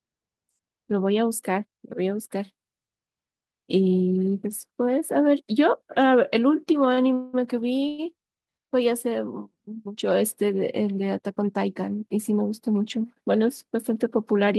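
At 6.94 to 6.99 s a sound is held about 32 ms too long, with a faint buzzy sustain. This is a short stall from a late packet. The jitter buffer ran dry, and the receiver stretched the last sound until the packet arrived, so nothing is lost.

From 7.13 to 7.35 s, and again from 7.88 to 8.00 s, the speech freezes into a fading buzz lasting about 200 ms and then about 100 ms. Neither fade reaches silence. These are call audio freezes, likely caused by packets held up in transit. The receiver filled each wait with the decaying last sound and then resumed where it stopped.

Between 12.16 and 13.05 s the speech sounds hurried, running at about 110% speed with no change in pitch. This is a jitter buffer speed-up. With too much audio queued, the receiver trimmed many tiny pitch-period slices, about a tenth of a second in total, to bring the delay back down.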